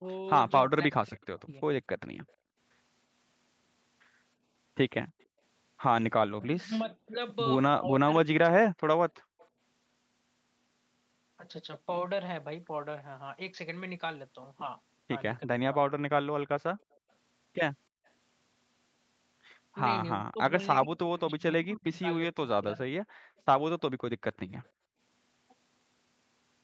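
From the start to 1.63 s the speech dips and breaks up in pieces, falling by as much as roughly 40 dB for about half a second in total. This is speech suppressed in double talk, likely because the echo canceller could not tell this talker from loudspeaker echo while both sides spoke, so it turned everything down. The same dips recur from 6.34 to 8.76 s, a brief one at 15.45 to 15.65 s, and a longer stretch from 20.16 to 22.94 s. The later dips reach roughly 25 to 40 dB and cut out up to about a second and a half of speech.

An echo leak runs from 1.23 to 5.24 s. A faint copy of the speech follows 317 ms behind the original at roughly 40 dB below it. It returns briefly at 9.39 to 9.48 s, slightly stronger at around 35 dB down, and again from 16.93 to 18.08 s. The likely cause is a speakerphone whose echo canceller let residue through and sent it back.

The background gated by the echo canceller partly overlaps these echo passages. 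The room sound drops by about 31 dB between 2.37 and 5.42 s, about 36 dB at 9.21 to 9.39 s, about 37 dB from 16.75 to 18.05 s and about 36 dB from 23.22 to 24.99 s. Each time it vanishes for a few hundred milliseconds and then snaps back. All of this sits within a band that ends at 8 kHz.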